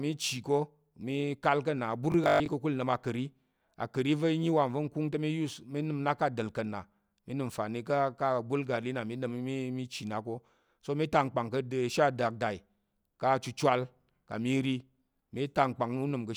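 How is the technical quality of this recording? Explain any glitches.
One glitch stands out. From 2.12 to 2.48 s the speech turns robotic: a rigid 50 Hz metallic buzz, likely from a 20 ms buffer being replayed, with roughly half the audio repeated and the rest skipped.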